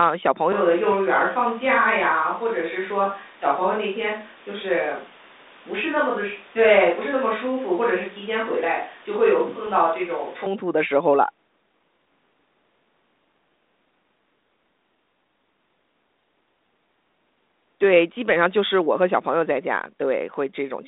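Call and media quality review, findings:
Switch to distant microphone, 0.52–10.46 s: sound abruptly roomy and hollow, bass thinner, level down about 5 dB, room noise about 25 dB under. Likely a failed close mic. Sudden onset and return distinguish it from gradual gain drift.

Bit errors on ADPCM link, 0.92–0.94 s and 9.67–9.71 s: short pops and rough bursts with brief level jumps, ringing on for milliseconds as the decoder's step size and predictor recover. Unlike clean dropouts, these leave no gap. The narrow 200 Hz–3.7 kHz band fits 32 kbit/s G.726.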